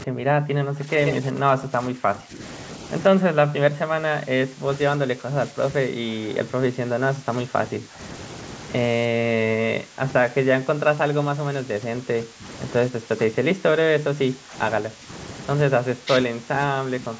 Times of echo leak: 1.06-1.14

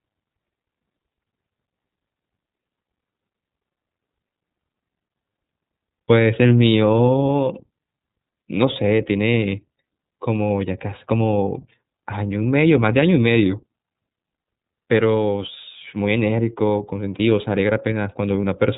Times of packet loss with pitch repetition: none

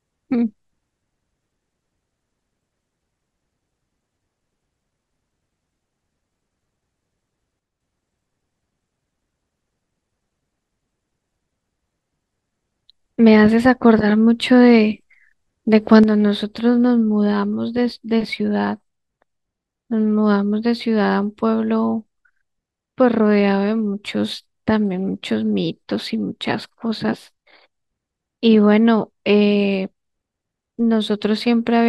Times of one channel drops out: 7.60-7.80, 16.03-31.88

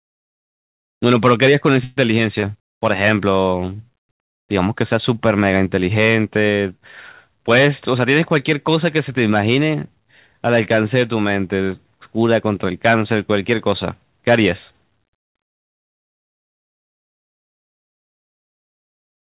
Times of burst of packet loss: 1.84-1.98

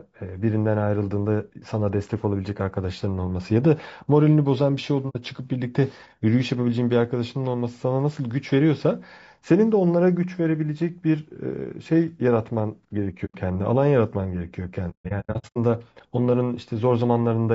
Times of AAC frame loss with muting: 5.09-5.16, 13.25-13.36, 14.90-15.57

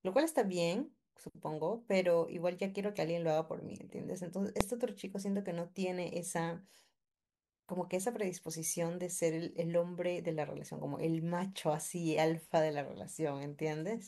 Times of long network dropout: none

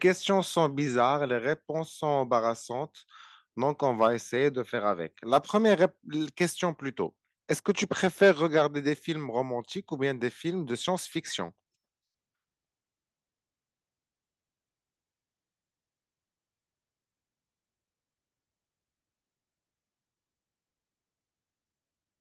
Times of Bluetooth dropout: none

